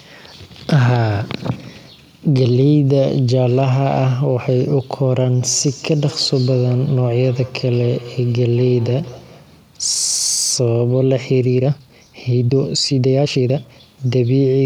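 From 5.42 s to 9.55 s, each word comes back again about a fifth of a second later, thin and ringing, peaking at about 20 dB below the speech itself. This is feedback echo between two devices: two devices in the same room share the call, and one device's microphone picks up what the other plays, so the sound loops back. Each device's echo canceller removes only its own playback and misses this return path.

Between 11.53 s and 13.83 s the pace abruptly jumps to 1.78 times normal speed while the pitch stays put, and the speech turns rushed. This points to a time-stretched section, likely caused by software squeezing that stretch of audio to fit a shorter length. It kept the pitch by cutting out short fragments, which produces the hurried texture.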